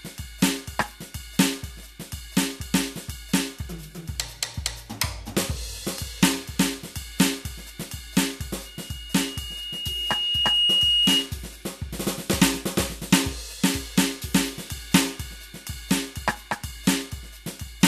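A music recording with a loudspeaker feedback squeal running from about 8.65 s to 11.37 s. A single tone at 2.9 kHz creeps in and swells over roughly two seconds until it sits a few dB above the music. That's a mic hearing the speaker it feeds, with the loop gain tipping past one at that frequency so the tone keeps feeding itself until the loop is broken.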